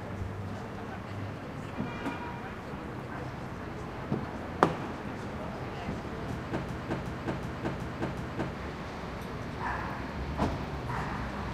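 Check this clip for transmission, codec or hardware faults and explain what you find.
One hardware-side fault is present. From 6.69 to 8.55 s, a system hang loop: the machine froze while the audio device kept replaying its ring buffer, so a 0.37 s slice (consistent with a 16384-sample buffer) repeats five times, a 2.69 Hz stutter, with about two seconds of audio lost.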